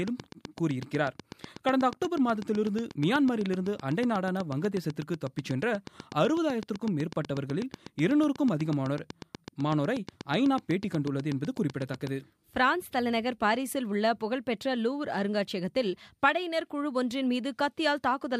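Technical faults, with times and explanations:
0.08–12.08 s, train of clicks: near-identical pulses at a regular 8.1 per second, about 10 dB above the sound, likely from interference; even vertical lines on a spectrogram, matching waveform spikes.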